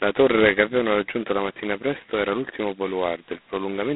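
A speech recording carries G.726 ADPCM coding damage from start to finish. The sound is confined to a telephone band of roughly 200 Hz to 3.5 kHz, with nothing above 3.9 kHz, and a harsh, rasping hiss rides on the speech, swelling and fading with its level. That heavy grit fits the lowest 16 kbit/s mode. The coder sends only a couple of bits per sample describing each prediction error, so quantisation noise tracks the signal. A spectrogram would show a hard ceiling near 3.9 kHz and a noise haze filling the band wherever speech is present, while the waveform would look fuzzy and granular on louder passages.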